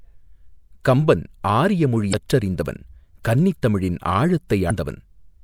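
Damaged data in a compressed stream at 2.10–2.14 s, between "கம்பன் ஆரிய" and "கற்றறிந்தவன் கன்னித் தமிழின்", and again at 4.67–4.71 s breaks this speech with brief glitches: corrupted bytes make the decoder misread frames and lose sync until the next header.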